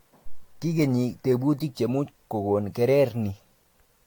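Across the whole speech clip the sound is swirly, smeared and hollow, with blurred consonant attacks and nothing above 19 kHz. That is generation loss, likely from about five successive AAC encodes, each requantising on a shifted frame grid so the damage accumulates.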